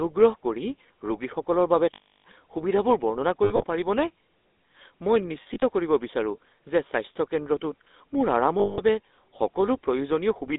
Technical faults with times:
0.00-10.59 GSM full-rate codec
1.94-2.24 lost GSM frames
3.44-3.64 lost GSM frames
5.42-5.63 lost GSM frames
8.60-8.80 lost GSM frames

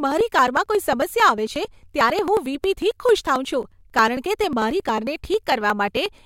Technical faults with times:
0.12-6.15 periodic USB or driver dropouts

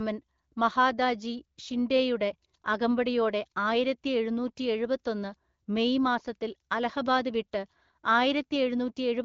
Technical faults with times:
none

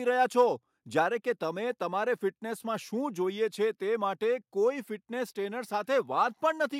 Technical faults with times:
none

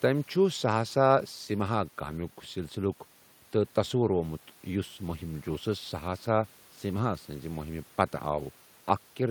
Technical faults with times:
none

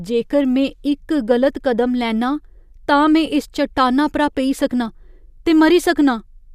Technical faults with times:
none

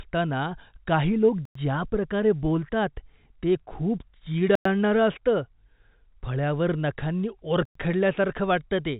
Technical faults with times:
1.45-1.55 gap between chunks
4.55-4.65 gap between chunks
7.65-7.75 gap between chunks

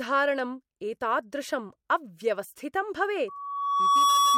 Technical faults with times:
3.28-4.38 loudspeaker feedback squeal

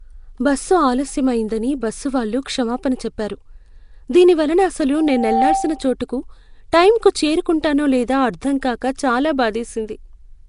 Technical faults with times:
0.00-10.49 Nellymoser compression
4.97-5.93 loudspeaker feedback squeal

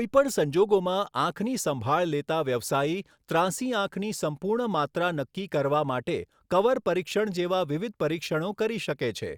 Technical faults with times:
none

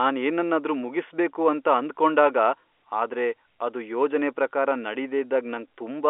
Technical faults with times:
none

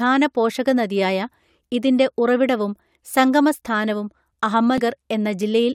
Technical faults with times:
4.78 damaged data in a compressed stream

